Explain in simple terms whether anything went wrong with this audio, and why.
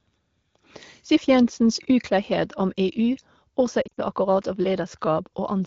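Between 3.82 and 4.00 s the speech briefly warbles and dips in short bursts. These are lost AMR speech frames: radio errors made the phone guess the missing sound.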